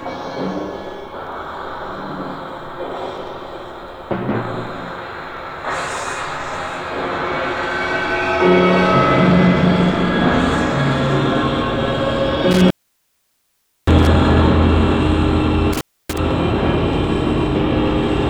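At 12.51 s and again at 15.73 s an intermittent contact drops the signal as a loose connection opens: about 1.17 s, then 0.28 s, with crackle at each edge and faint hiss between. The waveform shows flat gaps bordered by spikes; the spectrogram shows broadband clicks framing near-empty bands.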